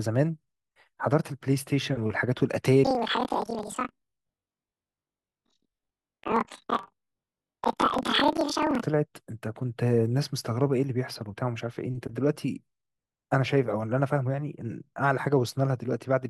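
It's a speech clip, and from 2.84 to 8.84 s it has the planar-read-as-interleaved fault: each block of left-then-right samples gets read as alternating pairs, so every 42.67 ms chunk plays twice at double speed. That puts the sound an octave up with a 23.4 Hz flutter, which fits 2048-sample blocks.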